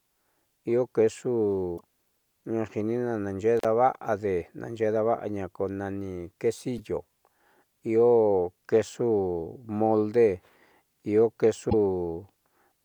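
First thing you hit is a short burst of damaged data in the compressed stream, from 1.74 to 1.81 s. Some bytes in the encoded file were corrupted, so the decoder misreads those frames, loses sync and has to hunt for the next valid frame header. That comes out as a brief glitch where the audio should be.

Then at 3.57 to 3.65 s there's an intermittent contact. A loose plug or cable opens the line for roughly 41 ms, so the audio drops out with crackle on both edges and a faint hiss in the gap, right before "daava'ade naaxeé daava'aña ko".

The same stream corruption comes back twice more, at 6.77 to 6.80 s and again at 11.67 to 11.74 s. Each time the decoder stumbles over bad frames and resyncs, leaving another brief blip or chirp.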